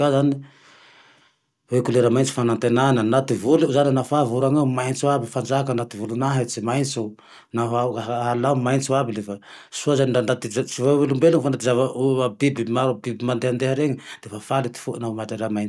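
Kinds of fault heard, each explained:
No kinds of fault are heard in this clip.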